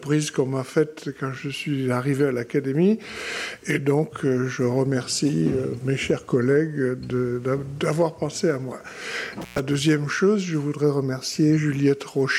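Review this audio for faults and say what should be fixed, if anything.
A loose cable or plug briefly lost contact, an intermittent contact fault, between 9.42 and 9.60 s. The line stayed open for about 118 ms, so the sound cuts out with crackle at both edges and faint hiss fills the gap. Reseat or replace the suspect cable and connectors, and secure them with strain relief so they cannot shift during recording.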